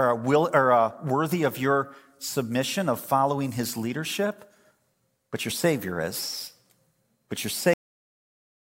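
At 7.73 s the speech stops abruptly. This is a cut-off end. The final buffers were never written or played, so a sound is chopped mid-stream. There is no natural decay. The remaining second, to the clip's end, is digital silence.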